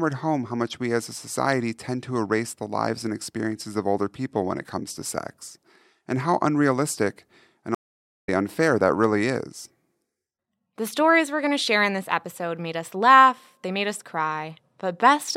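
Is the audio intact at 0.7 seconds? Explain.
Yes, the audio is intact at 0.7 seconds, with no dropout, click, distortion or other fault heard at that moment.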